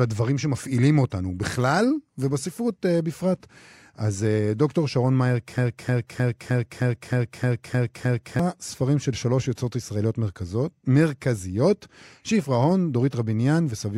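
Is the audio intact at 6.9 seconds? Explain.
No. At 6.9 s the audio is inside a broken-record loop lasting from 5.58 to 8.39 s. Playback likely stalled and kept resending its last held fragment, so a 0.31 s slice of speech repeats nine times back to back, and the real speech there is lost.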